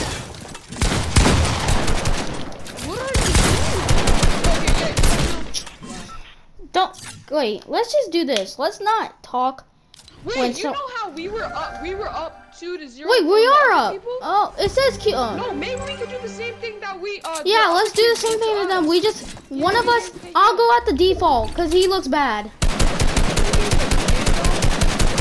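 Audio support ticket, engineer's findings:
No technical faults found on listening; signal path and playback behave as expected throughout, nothing to escalate.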